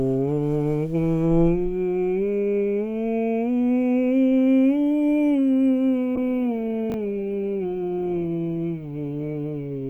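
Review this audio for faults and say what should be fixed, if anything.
From 6.16 s to the end of the music, a call bitrate drop makes the sound coarse and watery, with the treble noticeably dulled. The texture is consistent with the encoder being pushed from about 64 kbps down to about 17 kbps, bottoming out for roughly 2.2 s. At that rate Opus quantises more heavily and discards the upper band. On a spectrogram, the energy above a low cutoff disappears after 6.16 s, and smeared, blotchy patches replace fine harmonic detail. Tuning the bandwidth estimator to ramp down gradually, with a sensible bitrate floor for music, would soften this.

At 6.90 to 6.94 s, chunks out of order produce a brief jumbled stutter. A 20 ms piece of audio plays after the one that should follow it, which points to a single chunk arriving one slot late. No audio is missing, but the sequence is wrong. The waveform shows three hard discontinuities within that 40 ms span, and the spectrogram shows thin vertical broadband lines at each join. 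A jitter buffer that reorders by sequence number or timestamp before playout would prevent this.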